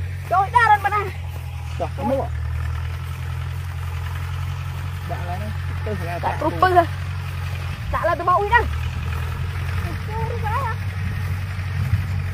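Periodic USB or driver dropouts run from 9.62 s to 12.12 s, repeating every 0.5 s, around seven in all. Something briefly stalls the audio path at a fixed interval, blanking roughly a millisecond to silence each time, heard as evenly spaced ticks over the sound.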